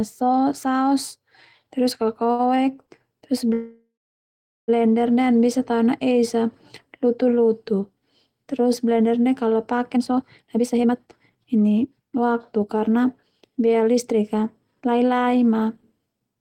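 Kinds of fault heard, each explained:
Short stall from a late packet: A packet arrived after its playout time, so the jitter buffer ran dry and the receiver stretched the last bit of speech until the packet came in, then carried on from the same point. Nothing is lost, but a sound is held too long with a faint buzz or dip. It happens at 2.31 to 2.41 s, holding for 75 ms, and again at 2.85 to 2.89 s, a briefer 15 ms hold.
Call audio freeze: Packets were most likely held up in the network long enough to empty the jitter buffer, and the receiver kept extending the last sound while it waited. From 3.53 to 4.70 s the speech stops for about 1.15 s. A fading buzz or hiss trails off, and roughly 780 ms of that is silence. When the packets arrive the speech resumes where it left off, so the gap is inserted rather than anything being cut.
Jitter buffer speed-up: After the delay, the buffer was holding more audio than its target, so the receiver trimmed many tiny pitch-period-length slices in succession to catch up. 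From 9.94 s to 16.36 s the speech plays at 115% speed while keeping its pitch, sounding rushed. Around a second of audio is squeezed out over that stretch to bring the delay back down.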